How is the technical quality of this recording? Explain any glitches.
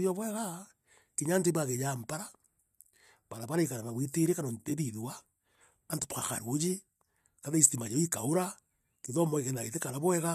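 Listening closely, nothing in the recording stood out as a technical problem, so there are no glitches to explain.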